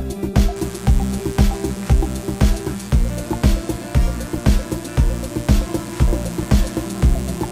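From 0.56 s to the end, mains buzz sits about 15 dB below the sound. Spikes twice per 60 Hz cycle make a steady, raspy drone.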